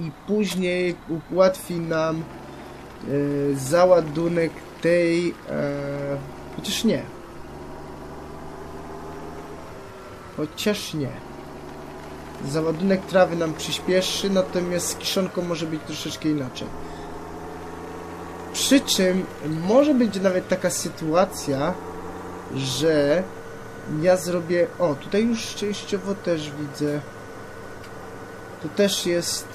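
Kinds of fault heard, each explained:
Corrupt frame concealed, 27.78 to 27.82 s: a brief span of roughly 40 ms near the end of the audio is concealed, a length that fits a single damaged AAC frame. The decoder detected corrupted bits in that frame and, instead of playing them back as a harsh squeak or burst, covered the gap itself by muting it or reusing a scrambled version of the previous good spectrum.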